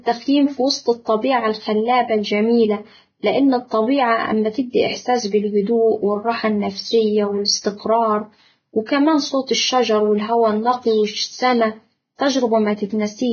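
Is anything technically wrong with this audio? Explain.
Yes. Throughout, the speech sounds hissy and grainy with smeared consonants and nothing above 6.6 kHz, likely heavy Vorbis compression at a low bitrate near 16.6 kbps, turning fine treble detail into noise.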